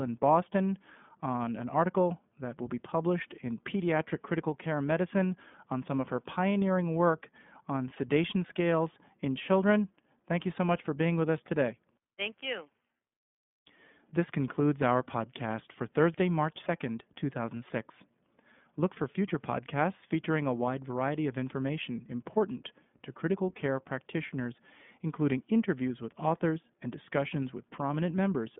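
Throughout the recording the speech has passed through the iLBC codec, a narrowband VoIP coder that rebuilds each short frame's excitation independently of the one before, and the character of the sound fits 20 ms frames at around 15.2 kbps. The result is a telephone-like band of roughly 150 Hz to 3.5 kHz with nothing above 3.7 kHz, so sibilants lose their edge, and the plainly audible coding damage leaves the speech slightly rough and synthetic.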